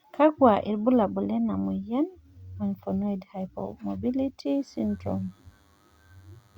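From 4.46 s to the end of the clip, a faint DECT cordless phone buzz sits well beneath the speech. The audio circuit rectifies radio bursts arriving every 10 ms, producing a thin, rasping 100 Hz buzz packed with harmonics, edgier than smooth mains hum.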